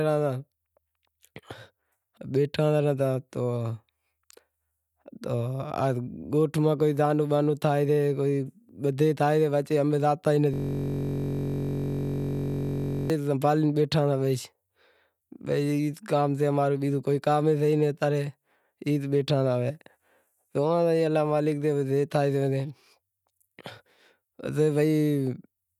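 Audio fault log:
10.54–13.10 s, system hang loop: the speech freezes into a rigid buzz at about 46.9 Hz as a single 21.33 ms slice repeats exactly, roughly 120 times. This fits a 1024-sample ring buffer being replayed while the system hung. Unlike hum or a tonal fault, the buzz's timbre comes from that frozen slice of speech. Unlike dropouts or glitchy stutter, every cycle is identical, with no gaps or variation, until normal playback returns.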